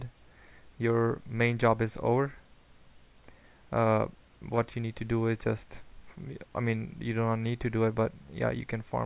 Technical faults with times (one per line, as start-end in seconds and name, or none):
none